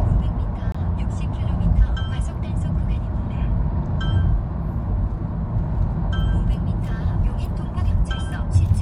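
A recording of sounds with a corrupt frame muted at 0.72 to 0.76 s: a damaged compressed frame was rejected and replaced by an abrupt 36 ms silence, with timing preserved.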